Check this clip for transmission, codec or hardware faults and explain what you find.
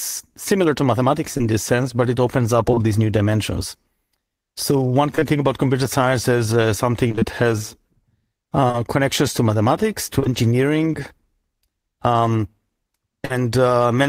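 The speech shows packet-loss faults of two kinds.

Scattered short gaps run from 1.37 to 2.80 s and again from 7.08 to 10.27 s. Packets went missing here and there: about three in the first stretch, about seven in the second. Each hole was patched by extending the preceding sound. The longest patches are around 15 ms, then around 30 ms. These patches are heard as ticks and hiccups in otherwise clear speech.

Short concealed packet loss occurs at 5.15 to 5.24 s and 13.25 to 13.32 s. The first is two back-to-back 20 ms losses; the second loses 40 ms. The decoder synthesised a continuation of the last sound, then crossfaded back. Each is heard as a brief smear or wobble, and a short consonant can disappear.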